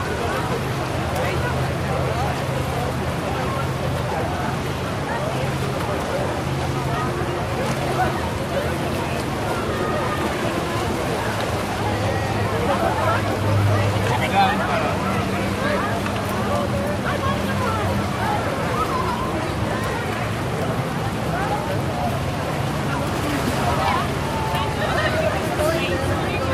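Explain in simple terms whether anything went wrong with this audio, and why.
Nothing went wrong that I could hear: listening to the whole recording, no problems with the sound stood out.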